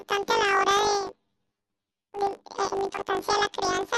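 From the very start to the end, the speech has a planar-read-as-interleaved fault. Each 20 ms block stores all its left samples and then all its right, but it's being read as alternating pairs. So each block plays twice at double speed, left then right, which is technically a 12-semitone jump. With blocks this short, though, you don't really hear an octave shift. It comes across as a robotic buzz at 50 Hz laid over the speech.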